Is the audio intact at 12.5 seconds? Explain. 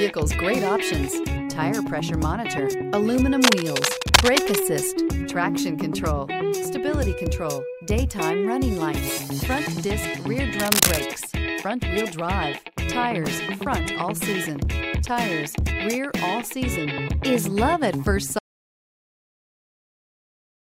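Yes, at 12.5 seconds the audio runs continuously, with no dropout, click, distortion or other fault at that moment.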